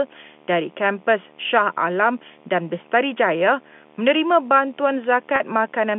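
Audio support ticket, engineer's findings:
Video or display buzz, throughout. Steady 75 Hz buzz with hash above it, roughly 30 dB under the speech and present even in pauses. Probable component: monitor or video cable near the audio path. The 75 Hz fits a display refresh rate, pointing to a screen or its cabling coupling into the line. The telephone-band G.711 audio (200 Hz to 3.5 kHz) carries the buzz along with the speech.

Packet loss with pitch repetition, 5.36 to 5.40 s, right after "menerima bantuan". A 40 ms hold with a slightly buzzy, sustained quality before the speech resumes. This fits two lost 20 ms packets. Probable component: network path or receive jitter buffer. The receiver's concealment repeated the last pitch period to fill the gap, so the sound holds rather than dropping to silence.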